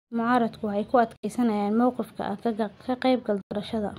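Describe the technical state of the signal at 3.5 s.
At 3.5 s the speech cuts to silence from 3.41 to 3.53 s. It then resumes further on. This is likely a Bluetooth dropout, with packets arriving too late and being discarded.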